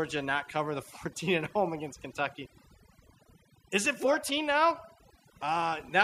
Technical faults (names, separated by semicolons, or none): overdone noise removal